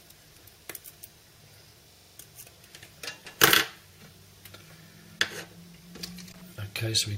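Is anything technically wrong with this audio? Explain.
Yes, three kinds of fault are present.

A block size mismatch (truncated) runs through the whole clip. One stage writes longer blocks than the next reads, and each block's tail is discarded. This leaves a 46.9 Hz buzz, consistent with 1024-sample blocks, at essentially normal speed. A spectrogram shows evenly spaced vertical seams about 21 ms apart.

A system hang loop occurs from 1.92 to 2.18 s. The output froze while the hardware kept replaying one ring-buffer segment. A 42.67 ms piece, which fits a 2048-sample buffer, repeats six times at 23.4 Hz, giving a stutter with hardly any audio lost. The waveform shows identical copied cycles.

Loose connector crackle appears twice, from 3.25 to 3.39 s and from 6.32 to 6.42 s. An intermittent contact chops the signal, producing a brief scratchy burst. The waveform shows irregular spikes and dropouts, and the spectrogram shows broadband vertical streaks at uneven spacing.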